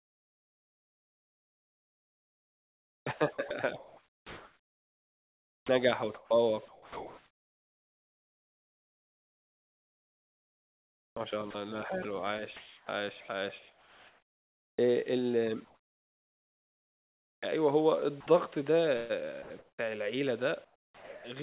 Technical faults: sound chopped by the voice detector; comfort noise in place of the background; sound dropped by the voice detector

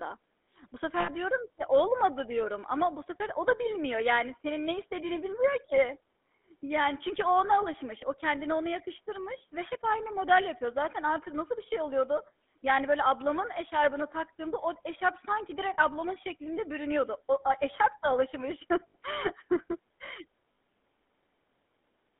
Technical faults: GSM full-rate codec; lost GSM frames

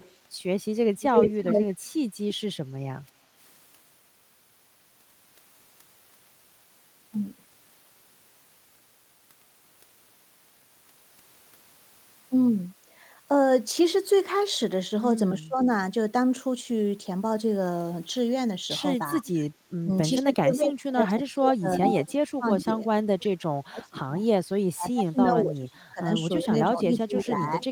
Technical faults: echo leak; speech suppressed in double talk

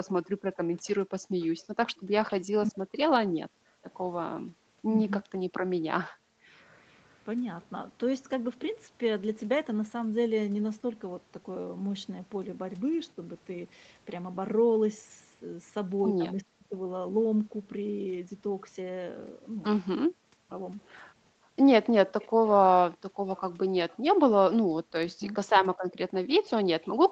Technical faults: echo leak; background gated by the echo canceller; speech suppressed in double talk

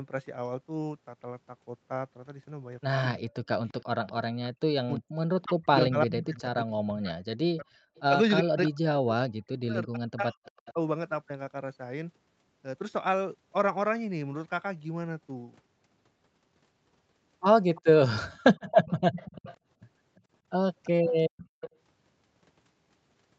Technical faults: speech suppressed in double talk; echo leak; background gated by the echo canceller

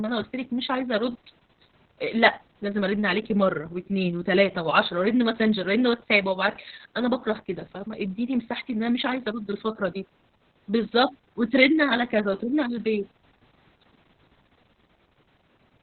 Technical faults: Opus voice compression

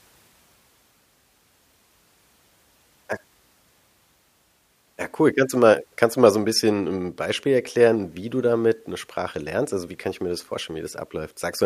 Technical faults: none

